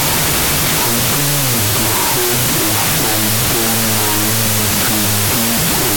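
Speech runs throughout at half speed and an octave low, buried under loud broadband noise, which points to a wrong sample width: the data look to have been written as 32-bit float and read as 16-bit integer. Each float sample is split into two integer values, doubling the sample count and so halving playback speed. Only the upper halves carry the sign, exponent and top mantissa bits, faintly tracking the speech, while the lower halves are effectively random noise.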